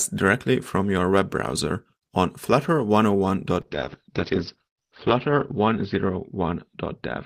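At 3.62 s the call's bandwidth estimate falls, triggering a call bitrate drop from 32 to 8 kbps that runs to the end. The encoder codes the speech coarsely and narrows its band from 20 kHz to 6 kHz, leaving it muffled and rough, bottoming out for 1.53 s.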